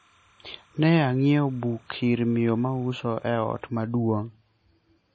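From the start to 3.6 s a faint, steady chirping warble sits behind the speech, about 35 dB below it and flipping between pitches around 1 and 2 kHz. This is timecode bleed: a 30 frames-per-second linear timecode square wave leaking in from a neighbouring track or cable.

Throughout, the speech sounds heavily watery and swirly, with metallic chirps on s sounds, smeared attacks, and nothing above 8.6 kHz. This is likely MP3 compression at a very low bitrate, consistent with about 32 kbps, where the encoder cuts the treble and switches weak frequency lines on and off from frame to frame.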